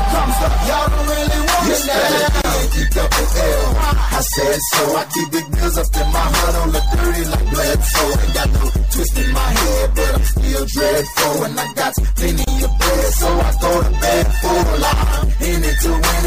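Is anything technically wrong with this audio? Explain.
Yes. Throughout, the sound is plainly watery and swirly; this is likely MP3 compression, fitting a low bitrate near 64 kbps. Weak frequency components blink between frames, unlike steady broadband noise.

Two gaps appear where separately encoded pieces were joined: 2.42 to 2.44 s (28 ms) and 12.44 to 12.47 s (31 ms), exactly 10 s apart. Each encoder run leaves start delay and end padding, so the audio falls briefly silent and then resumes exactly where it stopped. Random dropouts would not do that.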